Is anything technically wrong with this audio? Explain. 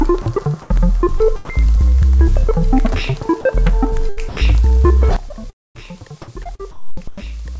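Yes, several. This music clip passed through a call path that leaves nothing above 8 kHz, and the sound shows voice-detector dropouts, a level jump and packet loss.

Sound dropped by the voice detector, at 0.22 to 0.26 s and again at 3.41 to 3.45 s: the sender likely judged the music to be background and briefly stopped transmitting. About 40 ms each time is replaced by steady synthetic noise before the music resumes.

Comfort noise in place of the background, at 0.62 to 0.70 s and 6.44 to 7.24 s: during pauses the transmission likely switched to discontinuous mode, so the receiver generated flat, featureless noise. In the first stretch, the real background, about 30 dB below the loud passages, is replaced by this smoother hiss, which is slightly different in level, by about 2 dB.

Sound chopped by the voice detector, across 1.18 to 1.98 s, 4.09 to 4.37 s and 5.29 to 5.80 s: the detector likely toggled repeatedly between sending and muting. 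Musical edges are cut out and filled with synthetic noise, about 60 ms, 157 ms and 260 ms in total, leaving holes in the music.

Sudden gain jump at 5.16 s: the digital gain likely changed in one step with no ramp. Music and noise floor both fall by about 16 dB at once, and the clip stays at that lower level to the end.

Repeated packet loss (robotic sound), 6.44 to 6.64 s: four separate losses occur, the longest 35 ms. Each gap is patched by extending the previous sound, covering about a quarter of that stretch, so the music turns choppy with pieces missing.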